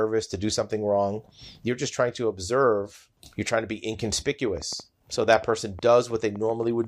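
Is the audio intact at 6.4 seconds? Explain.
No. A train of clicks runs from 4.48 to 6.85 s, so 6.4 s falls inside it. Something outside the signal, likely interference from nearby equipment or a faulty connection or power supply, is injecting a pulse about 6.35 times a second at an uneven pace, around fifteen in all. Each pulse has much the same shape and reaches roughly the level of the speech, heard as ticking or popping laid over it and in the pauses.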